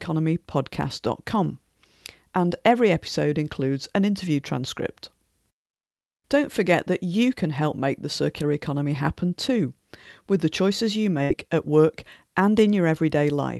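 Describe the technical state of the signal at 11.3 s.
A burst of packet loss hits from 11.23 to 11.32 s. Packets were lost or arrived too late, so the receiver extended the last sound after "with the choices you" for about 60 ms, fading it, then jumped to "at work and," dropping about 60 ms of speech.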